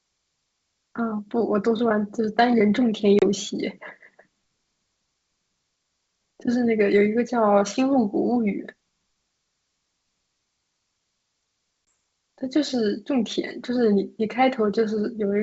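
Packet loss on an ADPCM call interrupts this wideband speech recording twice: a few packets dropped around 3.19 to 3.25 s leave a 30 ms silent gap, and a couple more at 11.88 s leave a 20 ms gap. Each gap has hard edges. Because the receiving decoder's adaptive predictor and step size drift away from the sender's during the loss, the speech resumes slightly distorted before settling. The G.722 wideband coding itself shows only its faint upper-band hiss.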